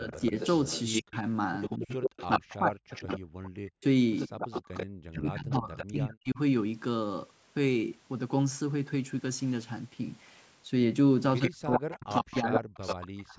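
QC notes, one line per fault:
0.00–0.34, 1.01–1.14, 1.69–6.39 and 11.39–13.39 s, speech suppressed in double talk: the voice dips and chops out while the far side talks, likely because the canceller can't separate the talker from the loudspeaker echo. The first dip is shallow, about 5 dB. The later ones go down by about 40 dB.
0.09–6.14 and 11.43–13.06 s, echo leak: a delayed copy trails the voice by 91 ms, likely from a loudspeaker echo the canceller didn't fully remove. It sits about 10 dB under the speech at first and about 5 dB under later on.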